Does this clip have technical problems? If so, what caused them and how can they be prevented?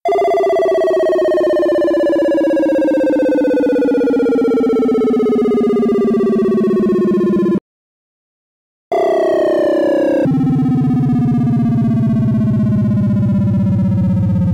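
Yes, there are two. At 7.58 s there's a playback stall: the audio cuts out mid-flow and stays silent until 8.92 s, about 1.3 s. The likely cause is the player running out of data or its thread getting blocked. A larger buffer and keeping blocking work off the audio thread would prevent this.

Right after, from 8.92 to 10.25 s, comes catch-up at higher speed: the player resamples its backlog at 2x, so everything runs double-fast and jumps up by roughly ten semitones before settling back. Capping the catch-up rate, or time-stretching instead of resampling, avoids that pitch jump.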